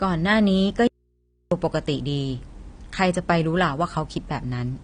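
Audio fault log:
throughout: low-bitrate audio saved at a high bitrate. Nothing above 9.7 kHz despite the large file, likely from an earlier low-bitrate encode, not a deliberate filter.
0.87–1.52 s: audio dropout to a faint residue. The speech cuts out abruptly for 0.64 s, leaving mains hum about 45 dB down, likely a live but disconnected input, not a pause or fade.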